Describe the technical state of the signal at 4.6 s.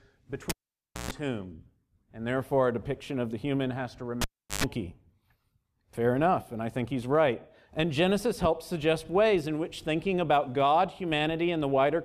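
At 4.6 s the speech is still missing. The event ends in a second pop as the speech comes back at about 4.64 s. This is the tail of a cable pulled and plugged in, spanning 4.21 to 4.64 s. A pop at 4.21 s marks the live lead coming out, and it stays out for about 0.37 s. Within that gap, a roughly 0.12 s 50 Hz buzz is the jack tip touching before the connector fully seats.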